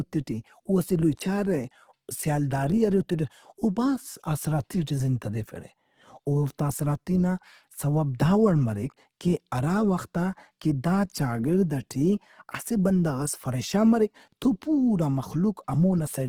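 Throughout the speech, plainly audible Opus compression damage, likely from a low-rate stream near 16 kbps in CELT music mode, makes tones grainy and rough. A spectrogram shows energy reaching about 20.2 kHz, but the upper bands look noise-filled and smeared rather than finely striated.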